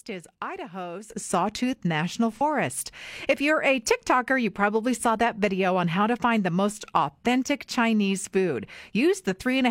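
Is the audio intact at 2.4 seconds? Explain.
No. From 2.33 to 2.41 s there is AAC frame loss with concealment: roughly 43 ms, consistent with one missing frame, is rebuilt from the previous spectrum, giving a brief smeared, noisy patch. The whole stretch from 1.1 s onward also sits about 11 dB louder, with background noise rising together. This is a sudden gain jump, likely a gain change applied without a ramp.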